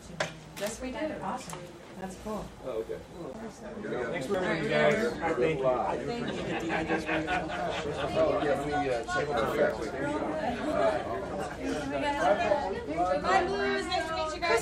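At 2.01 s, 9.70 s and 10.72 s the audio drops to a block of digital silence lasting 10 ms, about 3 ms and 5 ms. Samples were zeroed, likely when the output buffer went unfilled, so the signal stops and resumes with no fade; each gap is short enough to be heard as a tick or dip. On a waveform each appears as a flat, near-silent line; a spectrogram shows a thin blank column bordered by broadband vertical streaks.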